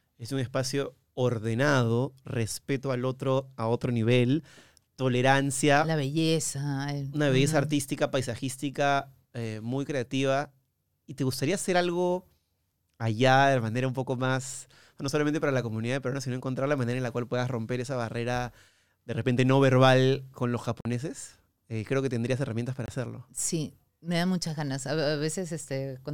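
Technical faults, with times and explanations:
20.81 to 20.85 s and 22.86 to 22.88 s, Bluetooth dropout. Sound goes abruptly silent for 46 ms after "no verbal con los", then 23 ms after "que tendrías herramientas para". It resumes further on, as if it had played on. Likely late wireless packets being discarded, fitting two packets and one.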